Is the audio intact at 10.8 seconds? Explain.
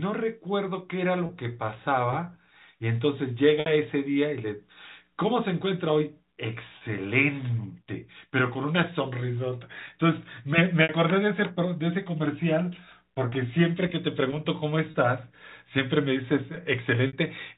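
No, there's a packet loss with pitch repetition running from about 10.83 to 10.89 s. Around 60 ms of audio went missing, which fits two dropped packets, and the receiver covered the hole by looping the last pitch period and fading it down over roughly 50 ms. You hear it as a brief held, buzzy tone where the speech should continue, then a short cross-fade back into the real signal, all still within the G.711 telephone band.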